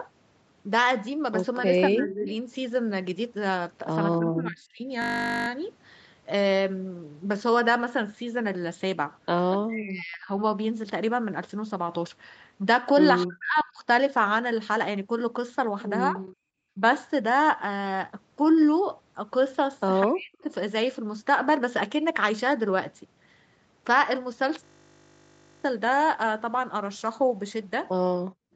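Speech suppressed in double talk first appears from 1.63 to 4.87 s. For about a second of that span the voice sinks by up to roughly 25 dB. The likely cause is an echo canceller that could not tell the near talker from loudspeaker echo while both sides spoke, so it pulled everything down. The same fault returns from 9.66 to 16.8 s, with dips of about 40 dB over roughly one and a half seconds, and from 20.04 to 20.45 s.

Echo leak overlaps these passages. A faint delayed copy of the voice sits about 15 dB below the speech from 1.95 to 2.34 s and from 9.5 to 9.58 s, trailing by 231 ms. From 13.58 to 16.36 s it trails by 216 ms at about 20 dB down, and a brief scrap near 20.4 s is about 35 dB down. This is likely loudspeaker sound that the far end's canceller failed to remove from its microphone and sent back.

A system hang loop occurs from 5.02 to 5.48 s and again from 24.64 to 25.64 s. A single 20 ms slice of audio repeats exactly, producing a steady 50 Hz buzz. 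This means the driver or computer stalled while the hardware kept replaying the same short ring buffer, which fits a buffer of about 20 ms.

Background gated by the echo canceller ends the clip, from 28.2 to 28.55 s. The room sound drops by about 36 dB for roughly 0.4 s. The canceller clamped the microphone hard while the loudspeaker was active. Throughout the clip, the call path limits content to 8 kHz.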